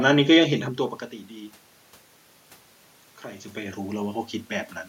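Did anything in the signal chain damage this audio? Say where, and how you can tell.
No, nothing in the signal chain has damaged this speech. The steady background is noise in the room itself, and the level shifts around half a second in and again near 3 seconds come from the talker moving relative to the microphone.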